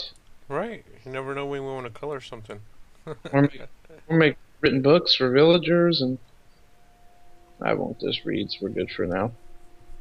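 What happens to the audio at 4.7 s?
At 4.65 s the audio jumps slightly ahead. This is compressed frames skipped: about one frame, roughly 20 ms, was never decoded, so playback leapt forward.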